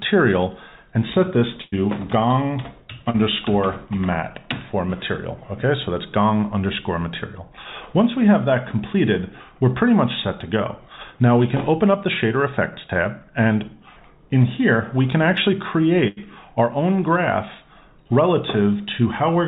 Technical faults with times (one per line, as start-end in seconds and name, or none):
1.62-1.74 burst of packet loss
3.10-3.16 short concealed packet loss
16.08-16.19 burst of packet loss